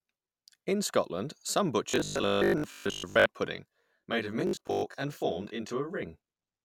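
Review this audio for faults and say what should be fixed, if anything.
From 1.90 to 3.26 s, and again from 4.47 to 4.83 s, the speech turns into a rigid, metallic buzz that only loosely tracks the syllables. This is robotic sound from repeated short buffers. The buzz sits at 50 Hz, which fits a 20 ms block being replayed over and over, with most of the real audio in those spans skipped. The likely cause is the playback or network buffer running dry, so the software repeats the last chunk instead of waiting for new data. To prevent it, enlarge the jitter or playback buffer and give the audio thread priority so new blocks arrive before the buffer drains.

From 3.56 to 6.03 s the speech sounds rough and slightly doubled, with the tone colour fixed regardless of what is said. This is a channel delay causing comb filtering. One channel runs roughly 20 ms behind the other, and when the two are summed to mono the shared content cancels at a series of evenly spaced frequencies, with the first notch down around 20 Hz and the rest packed closely above it. 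To prevent it, align the channels sample-accurately before any mono fold-down, or sum only one channel.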